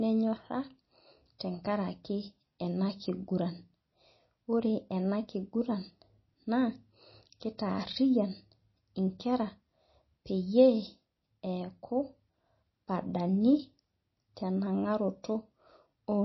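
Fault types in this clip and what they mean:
MP3 compression: Treble stops dead at 5.8 kHz and the speech has that watery, swirly edge, likely from a very low bitrate MP3 encode, something like 24 kbps.
Pre-echo: Twice, at 1.39 s and 7.58 s, a brief hiss smears ahead of a sharp attack, about 16 ms and 11 ms, as block noise spills backward.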